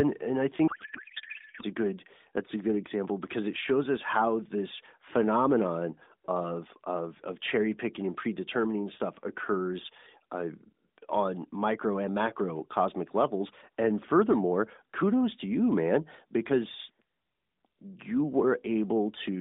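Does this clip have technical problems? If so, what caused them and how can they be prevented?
Yes. From 0.68 to 1.64 s, between "and I" and "a good that's a", a codec payload misread occurs: octet-aligned AMR frames are unpacked as bandwidth-efficient, so the decoder reads shifted fields and the speech turns into garbled, warbling noise. Prevent it by making both ends agree on the AMR payload format during call setup.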